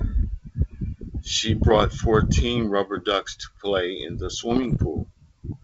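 Speech over a wideband phone link, hit twice by bit errors on an ADPCM link, at 1.67 to 1.82 s and 4.50 to 4.83 s. Each flipped bit corrupts the decoder's step size and predictor, so pops smear into rough bursts, seen as broadband vertical streaks and jagged level jumps.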